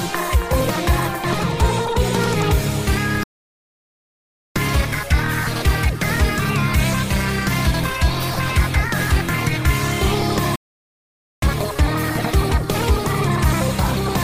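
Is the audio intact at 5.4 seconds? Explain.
Yes, at 5.4 seconds the audio is intact, with no dropout, click, distortion or other fault.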